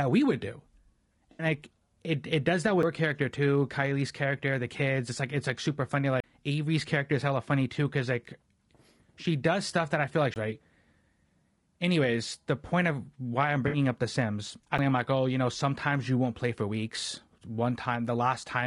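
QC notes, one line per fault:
Throughout: low-delay AAC compression. The speech sounds rough and grainy, with noise filling the gaps between harmonics and a thin, synthetic-sounding top band. The likely cause is AAC-ELD coding at around 32 kbps, whose short frames resolve pitch harmonics poorly and leave too few bits.
1.31–1.45 s and 13.67–13.77 s: AAC frame loss with concealment. Each is a brief smeared, noisy, phasey patch, the first just before "like it it does" and the second right after "point of why I'm". About 80 ms and 60 ms of audio were lost, which fits four and three dropped frames. The decoder rebuilt them from the last good spectrum.
2.83 s, 6.20–6.24 s, 10.34–10.36 s and 14.78 s: CD skip. Each is a tick and a momentary mute, lasting from a few milliseconds to a few tens of milliseconds, and the third comes just after "that I feel like". Playback then carries on from a different point, because the laser jumped to another turn of the disc's spiral.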